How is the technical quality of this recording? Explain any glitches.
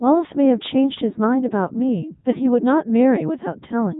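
Poor, because heavy vocoder coding runs through the whole clip. Codec 2 vocoder: the speech is rebuilt from pitch, voicing and a spectral envelope, synthesised from sine waves rather than the original waveform, so it sounds robotic and buzzy, with nothing above 3.8 kHz. That synthetic buzz, rather than smeared or warbling detail, distinguishes it from ordinary low-bitrate codecs and fits Codec 2's 3.2 kbit/s mode.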